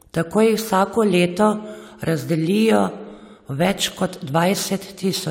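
A short bit of speech, and there's nothing technically wrong with it that I can hear.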